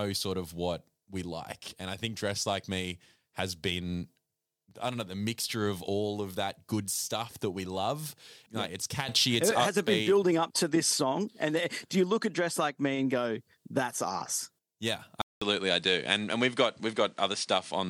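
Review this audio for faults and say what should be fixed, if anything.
At 15.2 s the sound cuts out for 200 ms. It returns duller, with nothing above 10.5 kHz. The level shifts noticeably, and faint new background noise appears. This lasts until 17.9 s. The input likely switched to a poorer device. Lock the recording input to one device so it cannot change mid-take.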